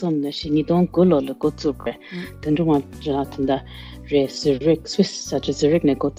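Bluetooth stutter at 1.81 to 1.87 s: about 43 ms of data never arrived, so the receiver looped its last buffer. You hear a brief buzz, then the sound jumps ahead.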